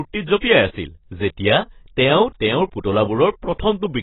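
Throughout the speech the top end stops dead at about 3.9 kHz, leaving it dull and smeared, with a warbling, fizzy texture on sibilants. The likely cause is heavy AAC compression: the encoder lowered its cut-off and starved the spectrum, consistent with roughly 16 kbps.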